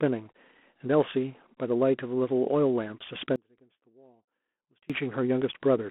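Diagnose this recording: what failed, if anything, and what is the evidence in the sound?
G.726 ADPCM throughout, at the codec stage: speech is confined to a 200 Hz to 3.4 kHz band, with a harsh, level-following hiss that fits 24 kbit/s coding.

Audio dropout to a faint residue from 3.36 to 4.90 s: speech cuts abruptly to faint sound about 30 dB down, likely a loss of the wanted signal while the path after the break stayed live.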